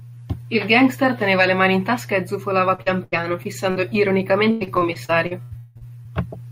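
From 2.75 to 6.07 s, just after "in tasca e zufolava", the speech has repeated packet loss (robotic sound). Sixteen short gaps, the longest 185 ms, are each patched by stretching the last sound, so about a quarter of that stretch turns choppy, with pieces missing. A single dropout would leave one hole instead.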